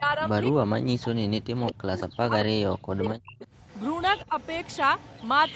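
Speech suppressed in double talk runs from 0.0 to 3.43 s, with the level falling in pieces over roughly two seconds in all, at worst by about 40 dB. This is likely an echo canceller that couldn't tell its own talker from loudspeaker echo during overlapping talk, so it pulled the talker down too. A much briefer dip of about 10 dB at 4.3 s has the same sound and cause.

Echo leak appears from 2.04 to 2.45 s and again from 3.07 s to the end. In both stretches a faint copy of the voice trails it by 225 ms, about 15 dB below the speech in the first and about 20 dB below in the second. The likely cause is a far-end loudspeaker whose echo canceller let part of the microphone pickup back into the call. The leaked copy is band-limited like the rest of the audio, which has nothing above 8 kHz.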